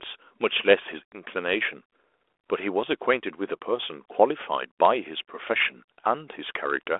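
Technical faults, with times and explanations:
No faults are present: the speech sits in a telephone band of about 300 Hz to 3.5 kHz with only light coding texture, which fits a G.726 ADPCM link at 32 kbit/s working as intended.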